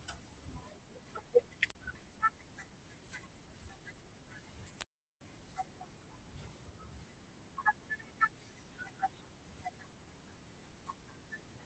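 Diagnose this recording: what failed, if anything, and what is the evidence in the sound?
The failure is a wireless microphone squelch dropout in the radio link ahead of the analogue wiring. At 1.64 to 1.77 s and again at 4.71 to 5.26 s, hiss swells, the output falls to near silence for about 35 ms and then about 390 ms, and the speech returns. The FM signal faded until the receiver's squelch gated it. Rising static before each hole distinguishes this from network packet loss, which the 8 kHz-limited call codec would conceal instead.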